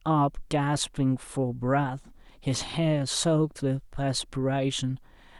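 Speech recording with no audible technical faults anywhere.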